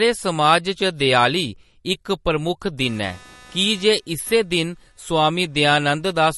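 MP3 compression damage runs through the whole of this speech recording: the treble stops dead at 11.6 kHz and the sound turns plainly watery and swirly as weak frequency components flicker in and out between frames. This is likely a starved encoder, consistent with a low bitrate near 40 kbps. Computer activity noise appears from 2.82 s to 6.12 s as a buzz pulsing at roughly 300 times a second, about 30 dB below the speech. It comes from processor or peripheral load currents disturbing the audio circuit's shared ground, so it follows the machine's activity rather than the speech.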